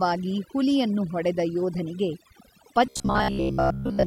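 From start to finish the background drops and breaks up into twinkling specks: overdone noise removal cut frequency bands near its noise estimate. From 2.86 to 4.06 s the speech becomes a rigid metallic buzz near 66.7 Hz, most likely robotic sound from repeated short buffers, with roughly 15 ms chunks replayed for most of that stretch.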